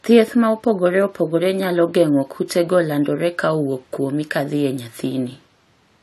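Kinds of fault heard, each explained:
Low-bitrate audio saved at a high bitrate: The speech has nothing above 14 kHz throughout. This is likely from an earlier low-bitrate encode that the larger copy cannot restore.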